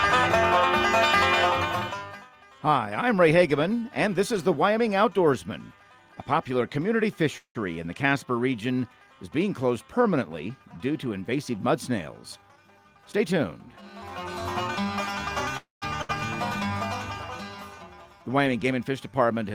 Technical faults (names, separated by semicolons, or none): call audio freeze; jitter buffer speed-up; burst of packet loss